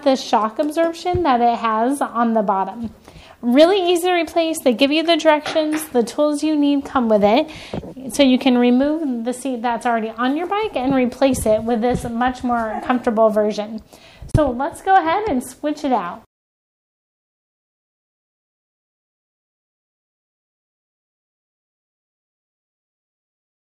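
At 4.72 s there is a bit error spike. A single sample jumps away from the waveform and then returns at once. This is what happens when one bit flips in memory or on a digital link. The sample's value shifts by a power of two. The spike reaches about -21 dBFS. It is heard as one sharp tick. Its energy spreads across the whole spectrum and has nothing to do with the surrounding sound.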